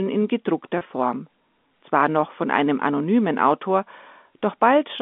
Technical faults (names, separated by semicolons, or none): packet loss with pitch repetition